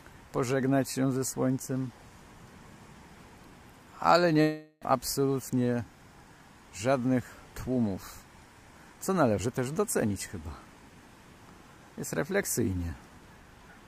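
From 4.41 to 4.97 s, likely a long network dropout, about 0.4 s is lost under a fading buzz: smeared, decaying spectrogram bands.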